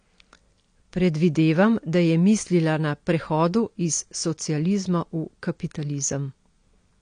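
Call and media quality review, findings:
Dull, smeared speech across the whole clip; fizzy, warbling sibilants; nothing above about 9.8 kHz. Likely AAC compression, AAC-LC. The spectrum is coarsely quantised per frame, leaving holes and noise-filled bands, and the cut-off is pulled down, which points to a low bitrate around 32 kbps. Damage is plainly audible throughout.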